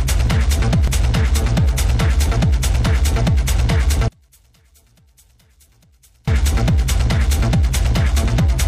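At 0.88 s and again at 2.87 s there is a small skip, from an overlap between stream segments. Around 32 ms of audio is lost at the first point and about 36 ms at the second. In both places the timestamps of neighbouring segments overlapped, and the player dropped the overlapping part as if it were a duplicate, though that audio was not really doubled. The waveform jumps across the gap. The spacing fits stream segments about 1 s long.

From 4.08 s to 6.28 s, summed playback falls by about 37 dB. What is left is a faint residue, and the centred content almost disappears. This is most likely one channel inverted. With the polarity of one side reversed, the material the two channels share cancels when they are added together, and only the small difference between them survives. The full level comes back at 6.28 s.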